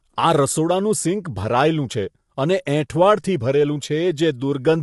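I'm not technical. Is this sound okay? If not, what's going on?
No. Low-delay AAC compression, throughout: the speech sounds rough and grainy, with nothing above 11.6 kHz, likely from a video-call codec squeezing sound into very short chunks.

Pre-echo at 2.65 s, right after "ભરાયેલું છે અને": a brief hiss arrives just before a sharp sound, because the codec smeared its noise backward into the quiet moment beforehand.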